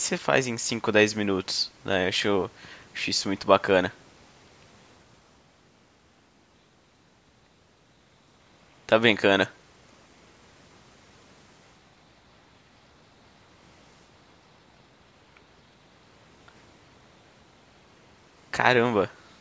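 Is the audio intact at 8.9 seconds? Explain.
Yes, the audio is intact at 8.9 seconds, with only the normal call microphone processing audible, which trims the lowest bass and leaves nothing above 8 kHz.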